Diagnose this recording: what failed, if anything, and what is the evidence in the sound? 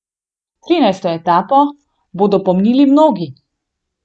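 Nothing failed here: listening across the speech, there's no break, glitch or distortion that would point to trouble at any stage of the chain.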